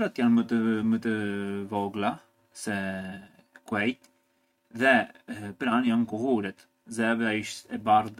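No technical faults turn up anywhere in the speech. The audio holds steady from beginning to end, with nothing to point to at any moment.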